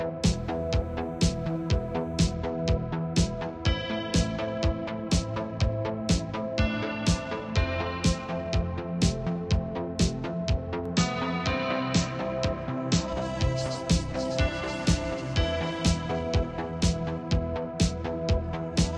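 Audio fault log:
0.34–2.34 s: timecode bleed. A faint chirping warble near 1 and 2 kHz sits well below the sound, as square-wave code with a 29.97-frame pattern leaks in.
10.86–13.13 s: input switched to a poorer device. The sound turns dull, losing everything above 8 kHz, with a faint new noise floor and no gap, likely from a narrower-band input.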